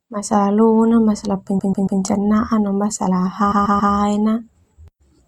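Speech with repeated frames in two places. After "lona masalah" (1.58–2.00 s) and after "no masalah" (3.51–3.93 s), a 139 ms block replays three extra times, a stutter adding 0.42 s each. Unlike an echo, each copy is identical and undecayed, not a fading tail.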